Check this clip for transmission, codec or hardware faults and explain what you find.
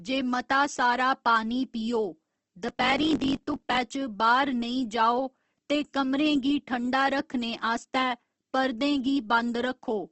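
Two faults are audible in this speech clip: codec damage throughout, and a short stretch of block-size trouble.

Opus compression, throughout: The audio is grainy and rough, with nothing above about 8.2 kHz. It is likely Opus in its music (CELT) mode at a low rate, around 16 kbps. The encoder fills starved bands with noise or folded copies, so tones become coarse rather than swirling.

Block size mismatch (truncated), 2.66 to 3.79 s: One stage writes longer blocks than the next reads, which fits a 1024-sample read, and each block's tail is dropped. The result is a 46.9 Hz buzz, with the audio running 1.12 times faster at roughly normal pitch.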